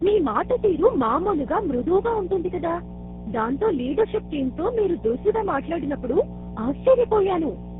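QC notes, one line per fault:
Throughout, mains hum: a ground loop or nearby transformer is coupling the 60 Hz power line into the signal path, leaving a steady low tone with some low harmonics sitting under the speech at a strong level, roughly 5 dB below it.
Throughout, tandem speech coding: the call crossed GSM full rate, G.729A and GSM full rate again, joined by G.711 A-law links, so three speech coders each re-encoded the previous one's degraded output. Speech sounds rough, muffled and warbly, with nothing above 3.7 kHz.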